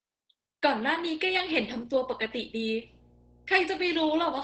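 From the start the speech carries heavy Opus voice compression: SILK linear-prediction coding at a rate that fits roughly 10 kbps leaves it muffled, hoarse and faintly robotic. A spectrogram shows nothing above 8.5 kHz and smeared, blocky harmonics in 20 ms steps.

From 1.24 s to the end at 4.43 s, mains hum joins in, a steady 60 Hz tone from power-line coupling, faint at roughly 30 dB below the speech. It appears as a flat horizontal line at 60 Hz on a spectrogram and a slow ripple under the waveform.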